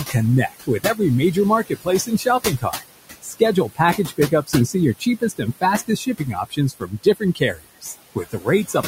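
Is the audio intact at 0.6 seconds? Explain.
No. Speech cut by the noise suppressor runs from 0.48 to 1.0 s, which covers 0.6 s. Here the suppressor mistook part of the speech for background noise and turned it down along with the noise, by as much as about 17 dB. Roughly a fifth of a second of speech in that span is affected, so quieter sounds such as soft consonants or word endings come out swallowed and faint.

Noise suppressor artifacts are also present at 0.6 s, as they are through the whole clip. The suppressor pulls down the bands it judges to be steady noise frame by frame, cutting the room noise, which sits about 12 dB below the speech, by about 17 dB. That frame-to-frame gating makes the leftover background rise and fall around the speech, so it can flutter or warble, and the speech can take on a thin, watery quality.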